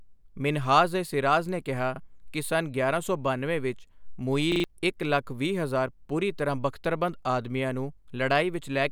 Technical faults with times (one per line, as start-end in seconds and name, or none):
1.96-2.00 repeated buffer
4.52-4.64 repeated buffer